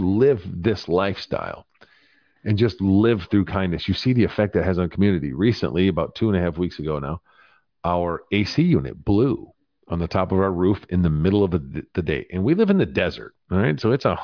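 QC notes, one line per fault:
No faults detected.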